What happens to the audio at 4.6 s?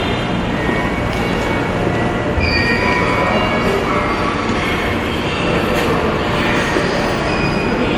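At 4.6 s the sound is swirly, smeared and hollow, with blurred attacks. That texture runs through the whole clip rather than starting there. It is generation loss, likely from the audio passing through MP3 encoding and decoding many times, perhaps around fifteen, at a low rate that fits roughly 96 kbit/s. Each pass quantises on a shifted frame grid, so noise and spectral holes pile up, while content still reaches about 19.9 kHz.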